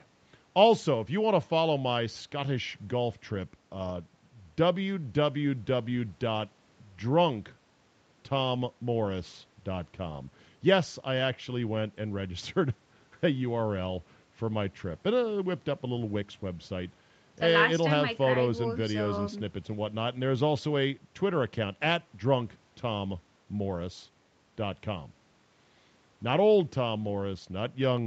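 No technical faults can be heard anywhere in the clip, so there is nothing to place in time order.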